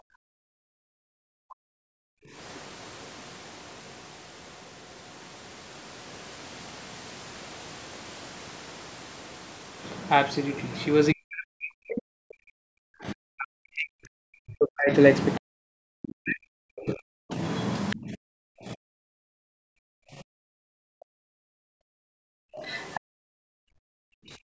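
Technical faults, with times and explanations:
0.00–1.84 s and 11.13–20.78 s, speech suppressed in double talk: the talker's speech dips by roughly 40 dB in pieces, around 1.5 s and 7 s in total. The likely cause is that the echo canceller heard both sides at once and turned everything down. Unlike gating, the talker is what disappears.
2.12–2.32 s, 19.14–19.25 s and 20.33–24.60 s, background gated by the echo canceller: the room sound falls by about 40 dB while the loudspeaker plays, about 3 s of it in the final stretch, then returns when the canceller releases. Only background is lost, not the talker.
2.54–2.72 s, 17.90–17.96 s and 22.55–23.00 s, other side's voice leaking through: a second, faint voice appears, about 35 dB below the speech at first and about 20 dB below later. This is likely loudspeaker echo the canceller failed to remove. It adds sound rather than cutting it.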